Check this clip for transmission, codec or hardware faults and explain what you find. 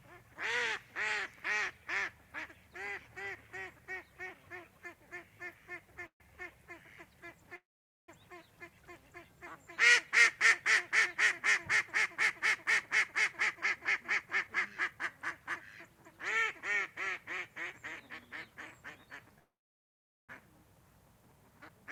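Two kinds of fault appear in this recording of everyday sounds: three call audio freezes and two jitter buffer speed-ups.

Call audio freezes occur at 6.06 to 6.21 s, 7.56 to 8.09 s and 19.38 to 20.30 s, most likely from packets held up in transit so the jitter buffer ran dry. The last sound is stretched into a brief fading buzz or hiss, then silence lasting about 0.1, 0.47 and 0.81 s. Unlike a dropout, nothing is lost, because the sound resumes exactly where it stopped.

Jitter buffer speed-ups occur at 12.85 to 14.48 s, running 4% fast, and at 21.51 to 21.86 s, running 11% fast. The receiver trimmed short pitch-period slices to shed excess buffered delay, roughly 70 ms and 50 ms. Pitch stays put, which distinguishes this from resampling, and the 11% speed-up sounds hurried.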